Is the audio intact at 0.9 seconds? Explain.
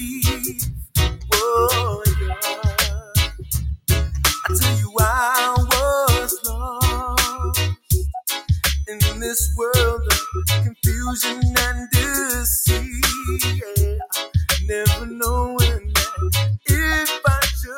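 No. At 0.9 seconds the audio sits inside a stretch, from 0.42 to 0.95 s, where the sound is cut by the noise suppressor. The suppressor treated this passage as noise and pulled it down, by about 21 dB at its deepest, so held and fading parts sink while sharper onsets survive. On a waveform the envelope collapses for roughly half a second, and on a spectrogram sustained bands fade toward the background while brief vertical transients remain.

This dip is the sharpest instance of a wider fault, a speech-tuned noise suppressor applied to sound that isn't speech. Across the whole clip it keeps mistaking steady tones, ambience and decaying tails for noise, so the gain swings by roughly 5 dB. That produces a pumping, fluttering thinness. A spectrogram shows tails clipped short and mid-level energy blotchy rather than smooth, and a waveform shows the envelope breathing unevenly rather than following the sound's natural decay.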